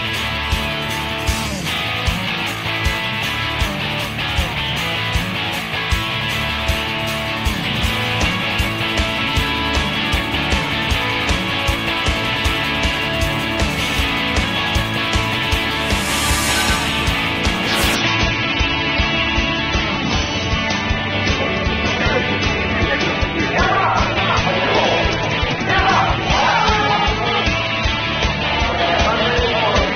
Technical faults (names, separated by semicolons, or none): adaptive stream at a lower bitrate